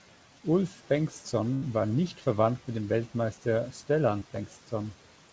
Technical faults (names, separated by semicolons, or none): burst of packet loss; short concealed packet loss